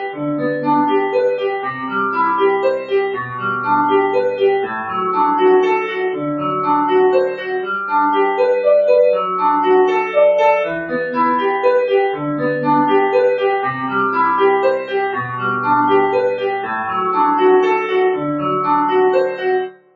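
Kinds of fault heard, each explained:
Noise suppressor applied to music or sounds: a noise suppressor built for speech stayed active here and treats steady tones and ambience as noise. Its gain keeps swinging by roughly 5 dB, so sustained parts sink and the sound pumps and thins while attacks pass.
Sound cut by the noise suppressor: at times the suppressor judged the sound as noise and turned it down harder, with brief dips and clipped decays at 0.00–0.21 s (about 9 dB), 3.28–3.43 s, 7.31–7.69 s, 19.30–19.45 s and 19.62 s to the end (about 14 dB).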